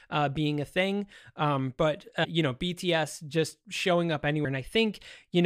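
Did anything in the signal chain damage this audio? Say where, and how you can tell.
Yes. At the codec stage, compressed frames were skipped: whole blocks of the encoded audio were never decoded, either missing from the file or rejected as damaged. In this speech, the sound jumps forward at 2.23 to 2.25 s, losing about 200 ms, and again at 4.44 s, losing roughly 150 ms. Each jump fits several frames of about 23.2 ms.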